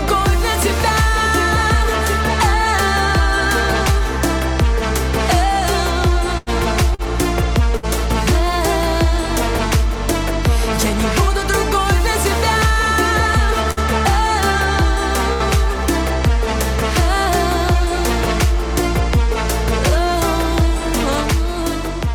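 First thing you'll hear is a burst of packet loss at 6.37 to 6.49 s. About 60 ms of audio never made it, so the receiver kept the last bit of sound going for roughly 91 ms, letting it sag away, then jumped ahead with that chunk gone. The extra 31 ms of fill means everything after it lands a touch later than before.

Right after, at 6.94 to 7.02 s, there's a short stall from a late packet. The jitter buffer ran dry while it waited, so the sound just before gets stretched for about 42 ms, a little held-over smear or dip, and then carries on from exactly where it left off. Nothing's actually missing there, it's only delayed a further 42 ms.

Three more bursts of packet loss follow, at 7.77 to 7.86 s, 13.71 to 13.80 s and 15.33 to 15.43 s. Each one drops about 60 ms outright, papered over with 61, 59 and 70 ms of faded-out continuation respectively, so you get that same brief drawn-out, decaying tail and then a small skip forward in the audio each time.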